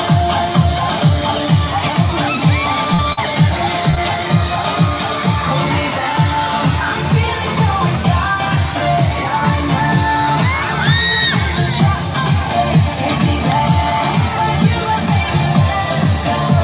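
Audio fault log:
2.94–3.00 s, then 3.91–3.95 s and 3.95–3.98 s back to back: short concealed packet loss. About 40 ms, then two 20 ms pieces, arrived too late. The receiver extended the preceding sound over each hole, then blended back. Each is heard as a brief smear or wobble.
3.12–3.19 s: burst of packet loss. About 40 ms of consecutive audio was lost. Roughly 46 ms of continued, fading sound was played in its place. It is heard as a short held buzz or hiss. The sound then resumes with that stretch missing.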